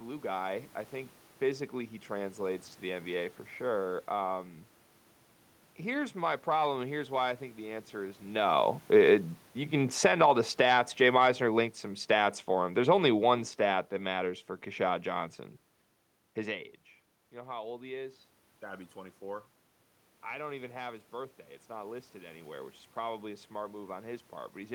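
From 17.31 s to the end, automatic gain rising: after the input dropped by about 15 dB, the gain control slowly raised its level to compensate, so the speech and the room noise swell up together over more than a second rather than staying steady.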